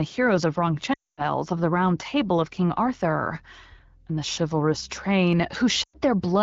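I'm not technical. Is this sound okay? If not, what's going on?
No, there are two glitches from lost AMR speech frames. Bits of the phone signal got corrupted, so the decoder guessed by stretching the last good sound. Around 0.93 to 1.29 s, after "heroes of", speech quickly drops to near silence, and near 5.83 to 5.96 s there's a shorter dropout.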